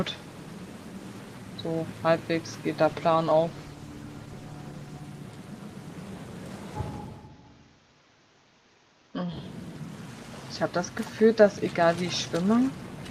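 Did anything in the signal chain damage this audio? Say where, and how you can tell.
Yes. A call bitrate drop in the network-driven codec stage runs from 2.87 s to 5.07 s. The sound turns coarse and muffled, with a watery, smeared texture, and stays at its worst for about 2.1 s before clearing. The bandwidth estimate fell, and the encoder was pushed from roughly 40 kbps down to about 17 kbps, so it quantised more crudely and shed the top end. On a spectrogram the upper band thins abruptly across that span, with blotchy, smeared energy below it. The waveform barely changes.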